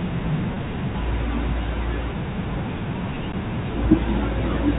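At 0.54 to 0.56 s, a packet loss with pitch repetition leaves a brief held, slightly buzzy stretch. About 20 ms of audio went missing, consistent with a single dropped packet, and the receiver looped the last pitch period. On a spectrogram this shows as frozen, evenly repeated harmonics. In the waveform, identical cycles repeat.

At 3.32 s, a CD skip produces a tick and a very short mute as the laser jumps to another spiral track, and the speech resumes from a different point. The waveform shows a near-flat gap with a discontinuity, and the spectrogram shows a thin vertical broadband click line, all below the 4 kHz ceiling of the G.711 telephone band.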